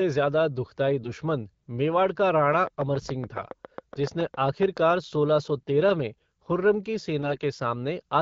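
AMR bit errors first appear from 1.02 to 1.10 s, between "ज़्यादा दुःखदायी" and "मेवाड़ का". A weak link flipped a noticeable share of the less protected bits in a few AMR frames, probably several percent, while the checksum on the core bits still passed. The excitation pulses landed in the wrong places and the fine pitch, gain and spectral values drifted. The speech keeps its rough pitch and level but turns briefly hoarse and gargly.

From 2.53 to 4.92 s a train of clicks runs through the audio, likely from electrical interference or a struggling interface. About twenty clicks of similar shape arrive at a regular 7.2 per second and peak about 10 dB above the speech. They are heard as steady ticking over the sound and in the gaps.

Inside that stretch, AMR bit errors return from 3.93 to 3.99 s and add the same scratchy roughness.

At 5.58 to 5.67 s, after "सोलह सौ" and before "तेरह में खुर्रम की", a lighter burst of bit errors roughens the speech more mildly.

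The longest burst runs from 7.22 to 7.37 s, just after "तेरह में खुर्रम की", and gives a gargly rasp across several frames.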